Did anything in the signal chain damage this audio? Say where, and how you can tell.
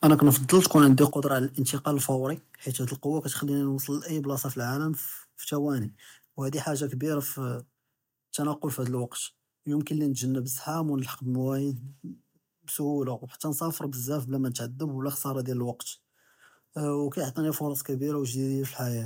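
Yes. From 0.04 to 1.04 s the loudest syllables have a harsh, crackling edge, with flattened peaks pushing about 4 dB past full scale and a few percent of samples pinned at the limit. This is likely microphone overload at the converter stage: the input gain was set so high that the waveform's tops were sheared off at the converter ceiling, adding that buzzy distortion to the loudest peaks during the first second.

The call processing then pulls the level down in three abrupt steps, with voice and background falling together: about 3 dB at 0.11 s, a much larger drop of about 9 dB at 1.11 s, and about 2 dB more at 2.16 s, just before "חית האד אלקוה כתכּליני". This is likely the microphone volume stepped down by the call software reacting to the clipped input, cutting the device gain in discrete jumps rather than gliding.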